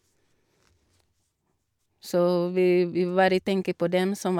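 Nothing in this recording stands out as a technical problem; the speech just runs its course without any glitch worth pointing to.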